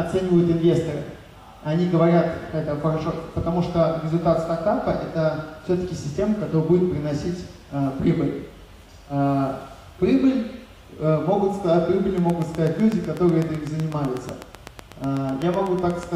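A train of clicks runs from 12.18 to 16.04 s, around thirty evenly spaced ticks at 8 per second, peaking roughly 10 dB above the audio, likely from electrical interference or a faulty connection. A spectrogram shows regularly spaced thin vertical broadband lines, and the waveform shows matching sharp spikes.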